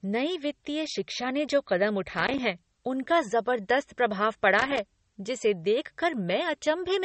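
From the start, the speech has a watery, swirling quality. The top end stops dead at 8.4 kHz, and the codec damage is plainly audible. The likely cause is MP3 compression at a low bitrate, perhaps near 34 kbps. Short of bits, the encoder drops all treble above a fixed point. It zeroes weak frequency lines, which flicker on and off between frames. That flicker makes the swirl, and attacks sound smeared.

From 2.09 to 2.39 s, a burst of loose connector crackle breaks in. It returns from 4.59 to 4.79 s. Both bursts are irregular and scratchy. A worn or dirty contact is making and breaking rapidly as it moves. Each break chops the signal for an instant. The fast, uneven chopping is heard as crackle.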